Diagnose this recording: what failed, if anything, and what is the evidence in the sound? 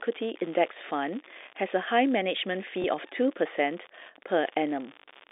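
An unreliable data bit sits at the converter interface. A fine crackle or fizz runs through the whole speech clip. It does not stop in the pauses, so it is not part of the signal. One data line is marginal. Its bit comes out wrong in a random share of samples. Each wrong bit adds a spike of the same size. Scattered spikes of equal height blur into this steady grit. It rides on top of the narrow telephone band of the G.711 A-law path, which fits a 64 kbps line.

Packet loss with the last packet repeated happens at the network stage, from 2.82 to 2.84 s. It is one small blip. Its length points to a single lost 20 ms packet. The receiver filled the gap by playing the previous packet again. That copy seldom lines up with the pitch of the speech. With only one packet lost, there is a single blip and no sustained 50 Hz buzz.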